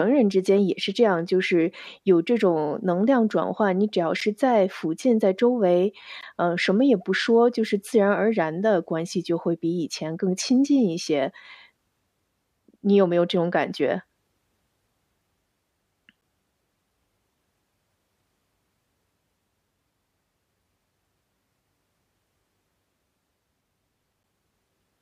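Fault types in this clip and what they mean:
Gap between stream segments: neighbouring segment timestamps don't quite meet, so the player inserts hard-edged silences of 8 to 16 ms on 2-second segment boundaries.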